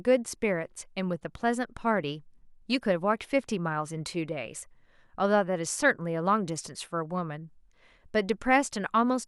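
No technical faults can be heard anywhere in the recording. The speech runs without any break, dropout or disturbance from its opening to its close.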